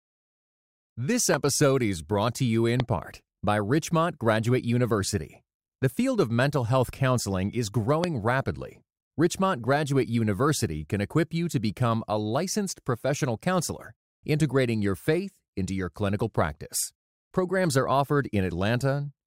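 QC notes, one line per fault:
1.34–1.36 s, 2.80–2.82 s and 8.04–8.06 s, loud pop: three single sharp pops, each roughly 15 dB above the speech. They fall just before "is brought to you", between that phrase and "part by", and just after "mental health counseling is". The speech continues underneath each one. On the waveform each shows as a tall, narrow spike standing clear of the surrounding envelope. On the spectrogram each is a thin vertical stripe of broadband energy. The likely cause is a brief voltage pulse, such as static or a driver glitch, being added to the signal.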